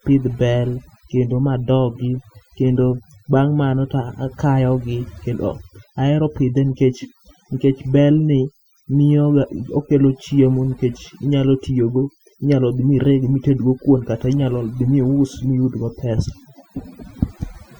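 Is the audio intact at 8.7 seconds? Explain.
No, at 8.7 s you're hearing overdone noise removal, which runs through the whole clip: bands near the noise floor get gated out, leaving twinkly near-silence, and quiet parts of the voice go with them.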